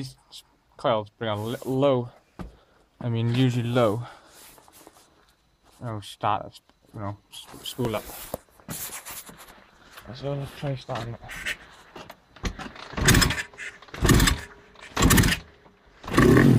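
At 1.84, 4.84, 7.85, 10.86 and 13.87 s there's a small stutter from overlapping chunks: each 3-second block replays about 7 ms at its join.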